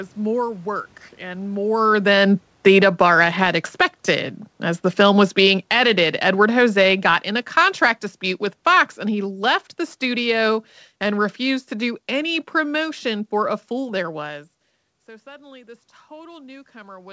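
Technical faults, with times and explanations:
1.56–13.64 s, automatic gain falling: Just after the talker moves at about 1.5 s, the input arrives too hot and the gain control pulls its gain down by about 17 dB over roughly twelve seconds. Voice and room noise sink together, so the level drop tracks the gain control rather than the talker.
2.98–4.29 s, automatic gain rising: Within that long decline, the gain control briefly reverses and lifts its gain by about 4 dB over about 1.3 s. The voice and the background swell together.
14.25–17.12 s, automatic gain rising: After the talker moves away at about 14 s, the input drops by about 21 dB, and the gain control climbs back toward its target for the rest of the clip. The voice recovers gradually while the room noise rises with it, all band-limited to 8 kHz by the G.722 call path.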